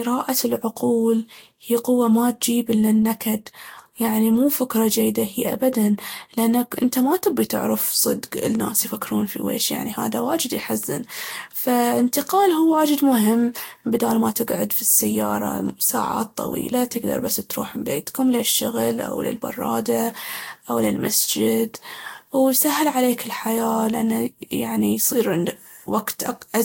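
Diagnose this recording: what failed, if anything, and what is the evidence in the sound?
The codec stage likely failed through generation loss: the speech appears to have been decoded and re-encoded with a lossy codec about five times, each pass quantising again on a shifted frame grid. The sound has a swirly, hollow smear from start to finish, with blurred consonant attacks, and nothing above 16.6 kHz. The artefacts fit Vorbis at around 65 kbit/s, but the degradation is worse than one pass at that rate would leave.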